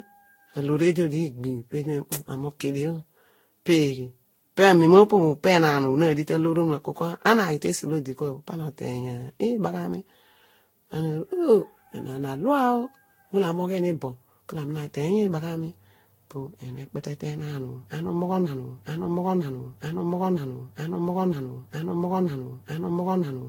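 Throughout, generation loss leaves the speech swirly, hollow and smeared, likely from around ten successive Vorbis re-encodes; a spectrogram shows a hard ceiling near 16.7 kHz with scattered holes. From 18.46 s to the end, a broken-record loop repeats one 0.95 s fragment back to back, likely a stalled stream; the waveform shows identical blocks, and the intended audio is lost.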